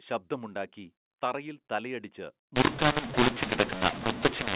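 At 2.56 s, just after "ശബ്ദമുണ്ടാക്കി തറയിൽ തലയടിച്ച്", a mu-law and A-law mix-up sets in and lasts to the end. The telephone path is G.711 at 8,000 samples a second with nothing above 4 kHz, and its mu-law bytes are being decoded as A-law. Each byte maps to the wrong logarithmic level, so some samples come out too loud and others too quiet. The speech turns harsh and distorted, and near-silent samples are lifted so that pauses fill with noise.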